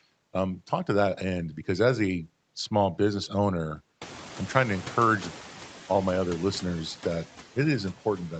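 Noise suppressor artifacts run through the whole clip. Frame by frame, the suppressor pulls down each band it judges to be steady noise by about 8 dB. The background sinks in the pauses and rises back under the speech, and this pumping is more exposed once the room noise climbs at roughly 4 s.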